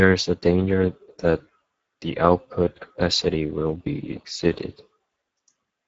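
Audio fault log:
Throughout: Speex codec damage, plainly audible. A bitrate near 10 kbps starves the excitation, leaving the speech hoarse and noisy, with a noise-like fill above 4 kHz and nothing past 7.8 kHz.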